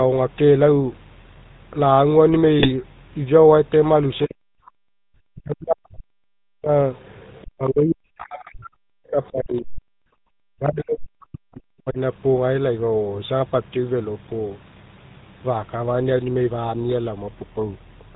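The whole recording carries the sound of the GSM full-rate codec. It is narrowband, with nothing above 4 kHz. The voice has a buzzy, gravelly edge throughout, and the damage is plainly audible. This comes from the codec. It models the vocal tract and excites it with a sparse, regularly spaced pulse train rather than the real waveform. The character fits the 13 kbps full-rate GSM coder.

From 2.60 to 2.71 s there are GSM bit errors. For about a tenth of a second the voice breaks into a squawk and gargle. Corrupted bits reached the decoder in a short run of frames. Wrong filter, pitch or gain values bend the spectrum and throw the level off. The result is a brief burst of garbled noise in the speech.

At 4.15 to 4.23 s a faint second voice slips in. This is the other side's voice leaking through, around 30 dB below the main speech. It is likely residual loudspeaker echo that the echo canceller missed. 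It returns at 6.95 to 7.47 s at a similar level. A further short scrap appears at 9.24 to 9.31 s, slightly quieter, around 35 dB down.

From 4.26 to 4.75 s the talker's voice drops sharply, by as much as about 40 dB. This is speech suppressed in double talk. Both sides were talking at once. The echo canceller likely could not separate the talker from the echo and turned everything down. The same dip recurs from 5.25 to 6.74 s and from 10.58 to 11.99 s. Each lasts around a second and a half, and the voice sinks or cuts out.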